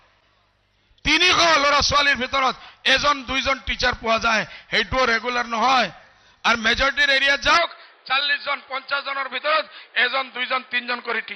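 At 7.57 s the sound turns dull and boxy for the rest of the clip. Nothing above 4.9 kHz remains. There is no gap and no level jump. A faint new background noise appears. The likely cause is an input switched to a poorer device.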